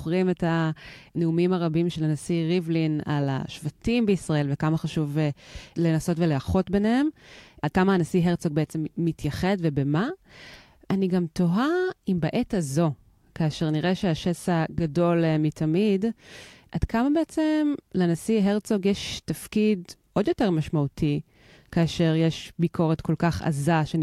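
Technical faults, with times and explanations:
No technical faults are heard in this clip.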